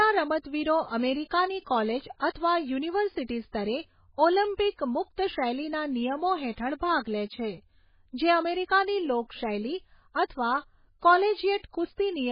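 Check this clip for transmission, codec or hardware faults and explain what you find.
Two faults are audible. Throughout, the speech sounds watery and dull, with nothing above 5 kHz. This is likely MP3 compression at a very low bitrate, around 16 kbps. Weak frequency lines drop in and out, and the treble is cut.

At 1.3 s there is pre-echo. A short hiss leads a sharp attack by about 10 ms, because the codec's block noise fills the silence before it.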